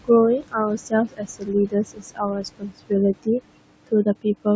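Across the whole speech recording, the background pumps down between phrases and swells back under them. These are noise suppressor artifacts: the processor pulls down the bands it judges to be steady room noise, here by about 21 dB, sitting roughly 12 dB below the speech, frame by frame. Between 0.39 and 2.92 s, about a second and a half of the speech itself goes faint and swallowed, dipping by about 22 dB at worst. That is speech cut by the noise suppressor, mistaking quieter speech for noise and attenuating it along with the background, within a call microphone chain whose band stops at 8 kHz.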